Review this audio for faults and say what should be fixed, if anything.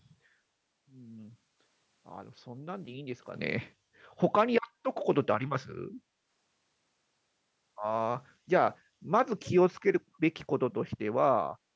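There's a brief echo leak at 9.81 to 9.85 s: a very faint copy of the speech, roughly 40 dB down, arriving about 249 ms late. It's likely the far end's echo canceller letting some loudspeaker pickup through. Better echo-canceller tuning or a headset would prevent it.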